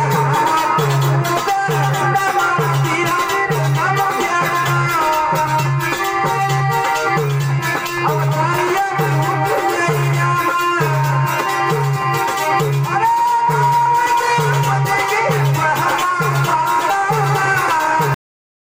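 At 18.14 s the sound stops abruptly, mid-event, with no decay or fade, and the remaining half second up to 18.65 s is dead digital silence. This is a cut-off end: the final stretch of audio never reached the output, most likely because the last buffers were never written or flushed before recording or playback stopped. What should have rung out is simply missing, leaving a hard edge instead of a natural ending.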